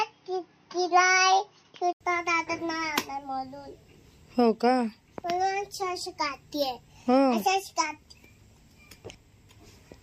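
From 0 to 2.01 s the sound is band-limited, with nothing above 6.3 kHz, then clears after an 80 ms silent gap. That is likely an input switched to a poorer device. A spectrogram shows the upper band empty until the switch.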